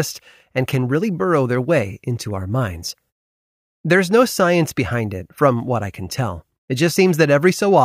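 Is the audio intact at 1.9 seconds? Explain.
Yes, at 1.9 seconds the speech plays through cleanly, with no dropout, click or distortion to be heard at that moment.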